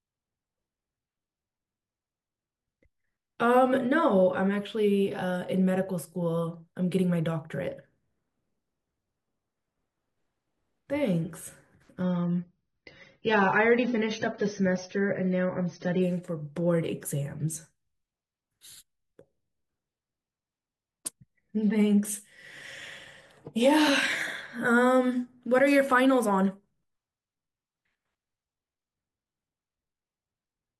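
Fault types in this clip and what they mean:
Adaptive stream at a lower bitrate: the player switched to a lower-quality version of the speech stream for about 4 s, from 12.02 to 16.02 s, as the connection slowed. The change is abrupt in both directions with no gap. Within that stretch nothing is heard above 6.3 kHz, so the speech turns dull and more codec artefacts come through. This fits a drop from roughly 96 kbit/s to 24 kbit/s AAC.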